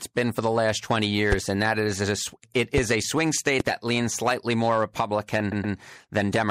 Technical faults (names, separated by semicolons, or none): hard clipping; MP3 compression; loud pop; repeated frames